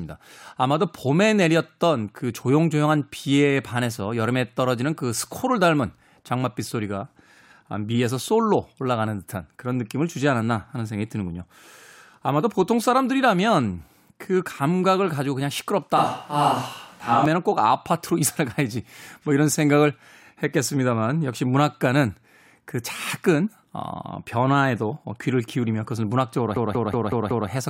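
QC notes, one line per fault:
15.97–17.26 s, switch to a distant microphone: the speech turns roomy and hollow, with thinner bass and room noise about 35 dB below it, while the level barely changes. The likely cause is the close microphone dropping out, leaving a farther pickup carrying the sound until it abruptly returns.
26.56–27.49 s, system hang loop: a 186 ms slice repeats exactly five times at 5.38 Hz, giving a machine-gun stutter. The system froze while the audio hardware kept replaying its ring buffer, which fits an 8192-sample buffer, and almost no audio is skipped.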